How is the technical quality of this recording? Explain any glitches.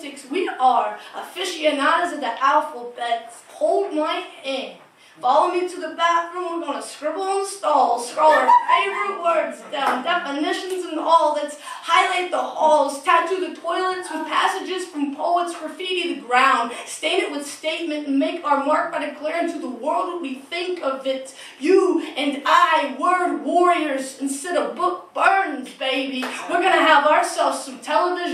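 Nothing in the recording stands out as a glitch; there are no dropouts, clicks or stutters anywhere to point to.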